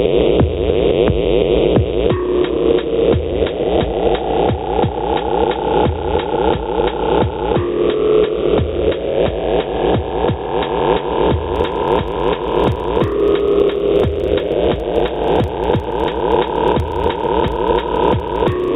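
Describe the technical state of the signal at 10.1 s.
At 10.1 s, gain pumping runs through the whole clip. Level swings by around 15 dB, likely from gain set too high and a fast limiter pulling it down.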